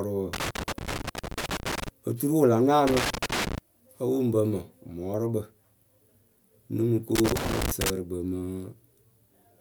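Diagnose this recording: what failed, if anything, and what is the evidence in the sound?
Loose connector crackle in the analogue wiring: irregular bursts of scratching at 0.33–1.88 s, 2.87–3.58 s and 7.15–7.90 s, the last between "mɨ ko" and "kpɨ mɨ". A worn contact repeatedly making and breaking chops the speech, unlike the evenly spaced clicks of buffer faults.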